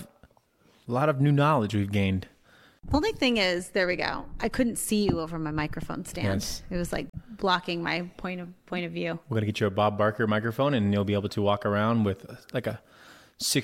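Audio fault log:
7.10–7.15 s: damaged data in a compressed stream after "was like"; the decoder misreads corrupted frames, loses sync and hunts for the next header, giving a brief disruption.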